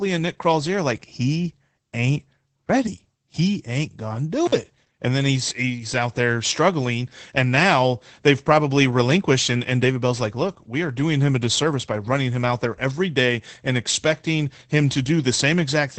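From start to finish, the speech has passed through Opus voice compression at a low rate, in a manner that points to the SILK linear-prediction coder running near 12 kbps. The coder has cut the band to wideband, leaving nothing above about 8.7 kHz, and is spending few bits on the excitation in each 20 ms frame. The result is plainly audible: the speech sounds muffled and dull, with a hoarse, faintly robotic grain.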